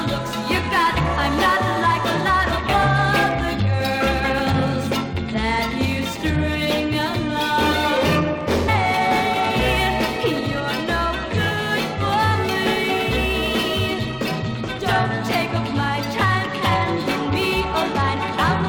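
At 8.67 s the sound abruptly jumps forward with a brief blip, as if a stretch of the programme has been cut out and playback resumed further on. This is likely a stream segment skipped, where one chunk failed to load and the player continued with the next.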